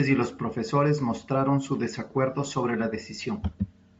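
Bluetooth LC3 compression runs throughout this speech clip. The upper spectrum sounds thinned and refilled with noise, giving a plainly audible breathy, grainy edge, likely from LC3's transform coding at a low rate that fits roughly 32 kbps with 10 ms frames.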